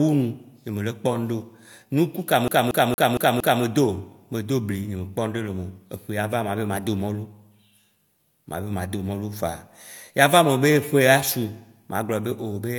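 A speech recording that locks into a rapid, even stutter from 2.48 s to 3.63 s, where the same 0.23 s fragment plays five times in a row with a brief mute at each jump before normal playback resumes. This is the classic CD stuck on one turn: a scratch knocks the laser back one track at the same point on each rotation, so a single disc revolution's worth of audio repeats until the player breaks free.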